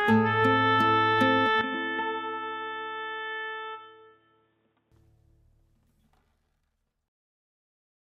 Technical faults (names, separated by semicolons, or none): input switched to a poorer device